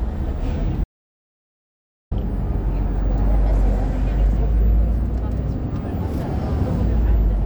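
The input was likely lost from 0.84 to 2.11 s, an audio dropout to silence: 1.27 s of total silence, cut off and resumed abruptly.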